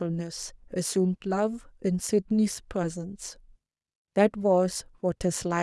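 No technical faults are audible anywhere in this speech.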